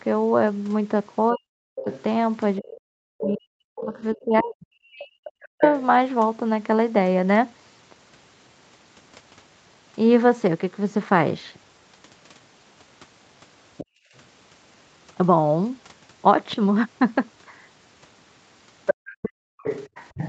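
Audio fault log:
1.32–5.62 s, speech suppressed in double talk: the talker's level keeps sinking, by about 40 dB at worst and for roughly three seconds in total, because the echo canceller likely couldn't separate near speech from loudspeaker echo while both sides talked, so it pulled everything down.
1.79–2.03 s, 3.21–4.43 s, 5.61–5.82 s, 13.77–13.86 s and 18.86 s to the end, other side's voice leaking through: a second voice sits underneath, from about 15 dB below the talker down to only about 5 dB below. That's likely loudspeaker playback the canceller didn't fully remove.
13.86–14.14 s and 18.94–19.63 s, background gated by the echo canceller: the room sound suddenly drops away, by about 33 dB and then about 40 dB, for a fraction of a second each time. The canceller clamped the microphone while the loudspeaker played, then released it.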